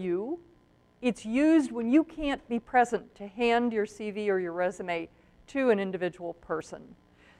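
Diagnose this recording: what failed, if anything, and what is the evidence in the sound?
The compressed stream carries damaged data in one spot, a codec-stage failure: the decoder misreads the corrupt frames, loses sync and hunts for the next valid frame header. The result is a brief glitch lasting about 44 ms, from 6.57 to 6.62 s.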